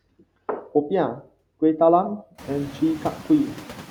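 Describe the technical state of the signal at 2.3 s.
At 2.3 s the playback rate has likely been stepped down by clock-drift software refilling its buffer, a drift correction step running from 2.07 to 2.83 s. The speech slows by about 6.3% and drops about 112 cents, just over a semitone, then snaps back to normal speed and pitch.

Noise suppressor artifacts also act here, as throughout the clip. The suppressor lowers the bands it judges to be steady noise, frame by frame, by about 14 dB, so the background sinks in gaps and rises under speech. The room noise, which climbs by about 22 dB around 2.5 s but stays about 18 dB below the speech, is pumped this way.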